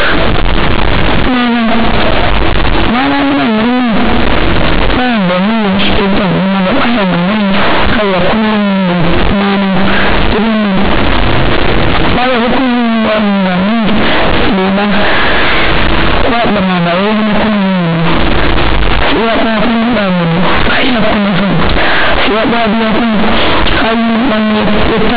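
From start to finish, the speech is harsh, very loud and buzzy. This is companded audio read as linear. The mu-law telephone bytes are being played as plain linear 8-bit samples, with no expansion step. Every sign change throws the output across about half its range. Quiet passages come out as large as loud ones. The waveform is badly bent, and pauses fill with strong noise. Beneath it, the band still stops at 4 kHz, as the 8,000-sample telephone coding requires.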